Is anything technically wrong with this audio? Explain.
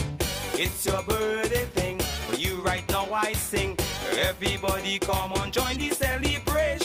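No, nothing technically wrong stands out here; the audio comes through without any glitches or problems worth pointing to.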